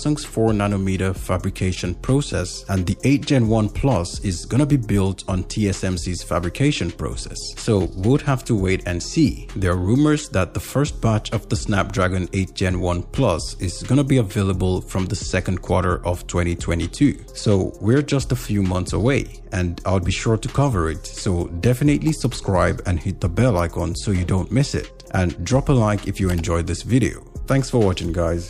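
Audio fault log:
Nothing stood out on listening, and no problem could be heard at any point in the audio.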